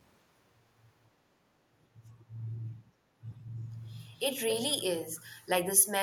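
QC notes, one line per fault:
4.14–4.19 s, 4.50–4.54 s, 5.16–5.22 s: echo leak. Short scraps of sound come back about 249 ms late: faint at first and last, fairly strong at 4.50 s. It's likely a far-end echo canceller letting some through.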